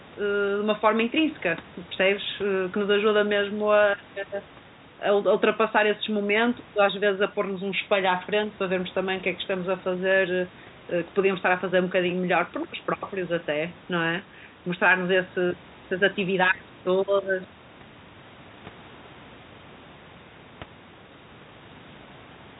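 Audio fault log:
No faults detected.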